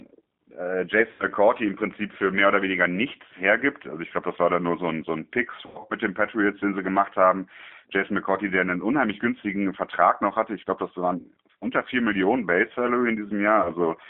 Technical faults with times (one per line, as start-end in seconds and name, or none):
0.00-14.09 G.729 codec
1.11-1.24 VoIP packet loss concealed by the speech codec
5.66-5.94 VoIP packet loss concealed by the speech codec
11.18-11.27 VoIP packet loss concealed by the speech codec
13.62-13.71 VoIP packet loss concealed by the speech codec